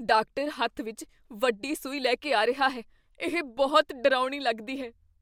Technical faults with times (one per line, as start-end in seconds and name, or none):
none